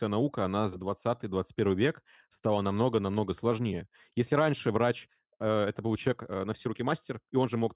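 Nothing in the way of technical trouble turns up anywhere in this stretch of speech, so there's really nothing here to flag.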